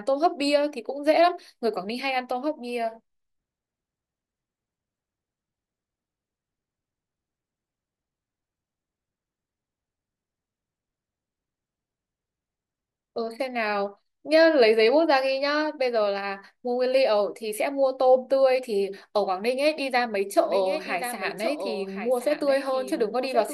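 From 20.45 s until the end, the speech suddenly acquires a trailing duplicate: a second, quieter copy of the same speech runs about a second behind the original, roughly 10 dB down, with full bandwidth and no reverberant tail, cutting in abruptly rather than fading up. This is a doubled audio track, likely caused by the signal being captured a second time through a slower path or by an edit leaving two misaligned copies layered together.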